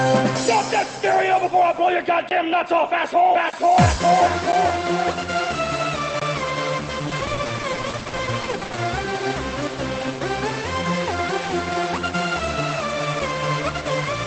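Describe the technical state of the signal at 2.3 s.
At 2.29 to 2.31 s there is a block of digital silence: a 20 ms run of samples drops to silence, with abrupt edges. Unlike concealed packet loss on the band-limited Opus call path, nothing is synthesised to fill the hole.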